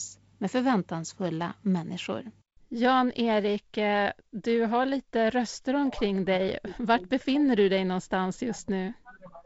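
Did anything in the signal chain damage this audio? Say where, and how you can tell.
No, nothing in this speech recording stood out as damage from any stage of the signal chain when I listened to it.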